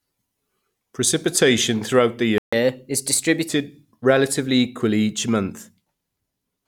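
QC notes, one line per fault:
2.38–2.53 s, playback stall: the speech cuts out mid-flow for about 144 ms, then resumes. The silence most likely comes from the player running short of buffered data or its output thread being blocked, so nothing reached the output until it recovered.
2.53–3.49 s, catch-up at higher speed: right after the gap the speech runs at 1.15 times normal speed, with pitch raised by about two semitones. The player is resampling its backlog to recover the lost time, so speed and pitch rise together before returning to normal.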